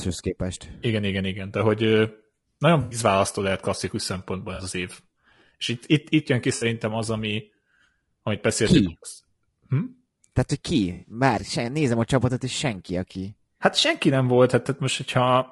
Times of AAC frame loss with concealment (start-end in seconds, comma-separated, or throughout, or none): 2.81-2.99, 4.55-4.61, 6.55-6.65, 10.93-11.12, 13.79-13.82